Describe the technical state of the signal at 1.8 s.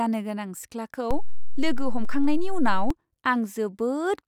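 At 1.8 s you're inside a DC step: right after "गोनां सिख्लाखौ", around 1.11 s, the zero line jumps about -17 dBFS, holds, then drops back at 2.90 s, thumping at each edge.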